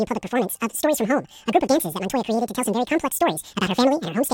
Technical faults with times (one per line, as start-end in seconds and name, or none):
0.00-4.33 audio read two samples at a time (double speed)